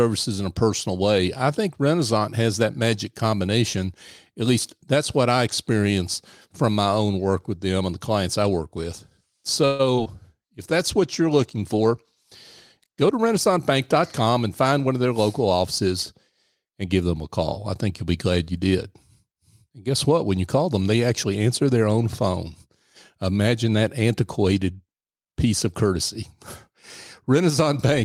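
A call audio freeze runs from 9.65 to 9.81 s. For about 0.14 s the speech stops advancing and the last sound is stretched into a fading buzzy tail rather than falling silent. The likely cause is packets held up in transit while the jitter buffer ran dry, so the receiver kept extending what it already had. When delivery resumes, the speech picks up exactly where it left off. Nothing is lost, but a gap has been inserted and the call now runs about 138 ms later.

Short concealed packet loss follows twice, at 9.95 to 9.99 s and at 10.04 to 10.07 s. Each time roughly 20 ms of audio never reached the decoder in time. The receiver patched the hole by carrying the preceding sound forward and then blending back into the real signal. Each patch is heard as a brief smear or wobble in the speech, and any short consonant in that spot can go missing.

A call bitrate drop begins at 10.09 s and lasts until 14.19 s. 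The bandwidth estimate fell and the encoder was pushed from 32 kbps down to 18 kbps, where it stays for about 3.3 s. With so few bits, the speech is coded coarsely and the upper frequencies are trimmed. The sound turns rough and somewhat muffled, with a watery edge, until the rate climbs back.

A jitter buffer speed-up overlaps the end of that stretch, from 13.09 to 14.95 s, just before "of their local offices". The buffer was holding more audio than it wanted. To catch up, the receiver cut out many tiny pitch-period slices in a row, about 150 ms in total. The speech plays roughly 7% faster with no change in pitch, so it sounds slightly hurried.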